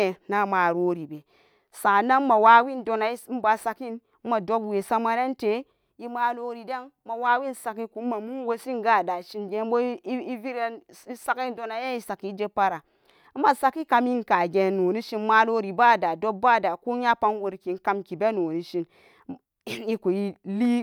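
No technical faults can be heard anywhere in it.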